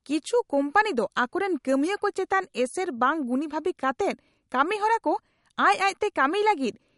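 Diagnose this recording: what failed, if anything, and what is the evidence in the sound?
The failure is most likely at the codec stage: lossy MP3 encoding starved of bits, with damage that is plainly audible across the whole speech recording. The encoder has cut the treble at a fixed point, leaving nothing above 11.2 kHz, which fits a low bitrate of around 50 kbps. With so few bits, weak frequency lines are dropped and return frame by frame, giving the speech a watery, swirling texture, chirpy sibilants and softened consonant attacks.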